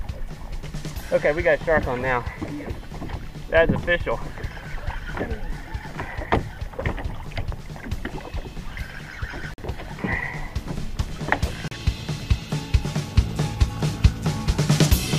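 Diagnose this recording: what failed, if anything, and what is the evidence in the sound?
Playback stage: brief dropouts to silence at 9.54 s (about 46 ms) and 11.68 s (about 35 ms), shown as flat gaps in the waveform and vertical blank columns on the spectrogram. This is likely a Bluetooth stall, where the headphone buffer ran empty while delayed packets were resent.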